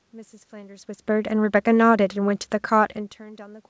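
Speech, with no technical faults.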